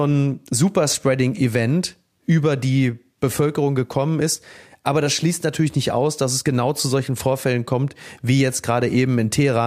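No faults detected anywhere in the speech recording.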